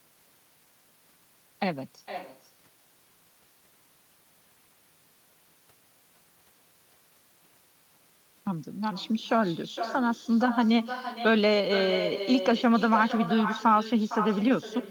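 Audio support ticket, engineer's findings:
Echo with no canceller, throughout. Every phrase is repeated about half a second later, about 11 dB down and thinner. Far-end loudspeaker is feeding its mic, with no AEC. A distinct delayed copy rather than a smeared reverb tail rules out room acoustics.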